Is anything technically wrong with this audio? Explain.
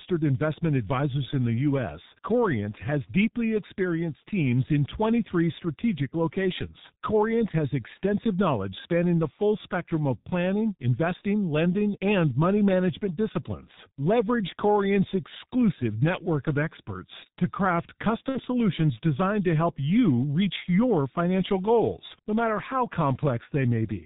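Yes. Throughout, the speech sounds muffled and hoarse with smeared consonants, which fits heavy G.723.1 codec compression at about 6.3 kbit/s, discarding everything above 4 kHz.

At 18.29 to 18.39 s, the speech stretches into a fading buzzy tone or coloured noise, VoIP packet loss concealed by the speech codec, consistent with two lost 30 ms frames being extrapolated.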